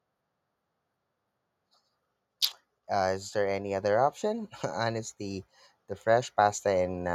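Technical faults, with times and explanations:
2.92–5.49 s, automatic gain rising: the level climbs by about 5 dB over roughly two and a half seconds as the automatic gain control, having judged the input too quiet, steadily raises its gain. Because the gain acts on the whole signal, the speech and the background noise floor swell together rather than the speech alone getting louder, and the slow ramp is heard as a gradual lift in loudness and room noise instead of a step.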